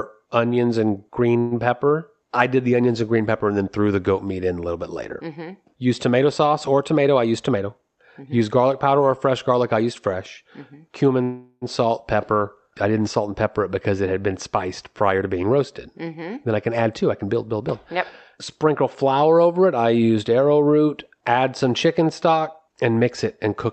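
Right after "onions and", at 1.39 to 1.54 s, there's a short call audio freeze: about 120 ms of smeared, fading buzz stretching the last sound, likely packets stuck in transit draining the jitter buffer, after which the speech resumes where it left off. From 7.01 to 8.42 s, between "tomato sauce or" and "garlic powder or fresh", a jitter buffer speed-up kicks in. The receiver trims tiny pitch-period slices, around 150 ms in total, so the speech runs about 8% fast at unchanged pitch and sounds a bit rushed. A longer freeze hits at 11.23 to 11.65 s, just before "salt pepper I didn't". Roughly 380 ms is filled with that decaying continuation, including about 30 ms of silence, and then the speech picks up with nothing lost. Two more speed-ups follow: 14.93 to 15.58 s at about 12% faster, trimming around 100 ms, then 16.02 to 17.72 s at about 8% faster, trimming roughly 150 ms, both with that same hurried feel. 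Throughout, the Opus call path caps the top end at 8 kHz.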